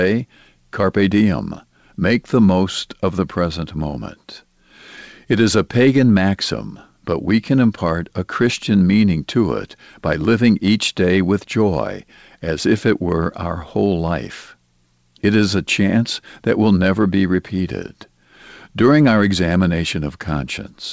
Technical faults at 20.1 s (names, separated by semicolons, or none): none